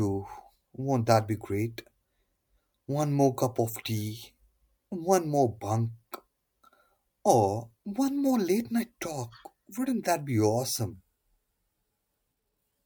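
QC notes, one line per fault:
10.93 to 12.86 s, section at the wrong speed: right after "that be", the speech suddenly slows and drops in pitch, and stays that way to the end. Playback runs at 0.812 times the recorded speed. Speed and pitch fall together, so the voice sounds deeper by about four semitones and drawn out. The change is abrupt, not gradual. The likely cause is a section played or resampled against the wrong clock.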